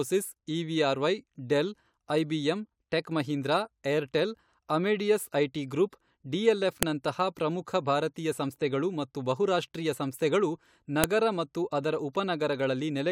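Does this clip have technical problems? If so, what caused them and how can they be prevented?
Yes, there are two sharp, loud clicks in this speech clip, at 6.83 s and at 11.04 s, the second landing right after "ಸಂಸ್ಥೆಗಳು ಮತ್ತು ಬಹುರಾಷ್ಟ್ರೀಯ ಸಂಸ್ಥೆಗಳು". That's a file header played as audio: the recording was stitched or streamed from separate WAV pieces, and each piece's header bytes got read as sample data, so a burst of garbage values snaps out regardless of what the speech is doing. To prevent it, strip the headers and concatenate only the raw sample data when joining pieces.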